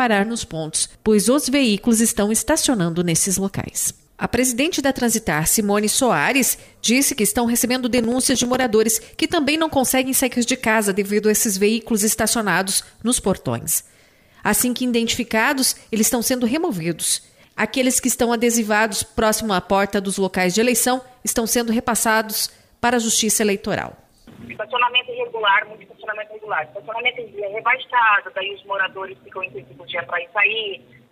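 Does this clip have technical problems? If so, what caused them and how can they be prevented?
Yes. From 7.92 to 8.64 s there is processor overload crackle: the processor repeatedly missed deadlines for buffers of a few milliseconds, leaving around twenty tiny silent gaps heard as a gritty burst, unlike a dropout's single clean hole. Larger buffers or lighter processing load prevent it.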